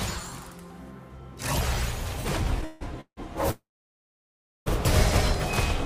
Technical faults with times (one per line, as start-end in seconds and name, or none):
2.64-3.19 call audio freeze
3.51-4.68 call audio freeze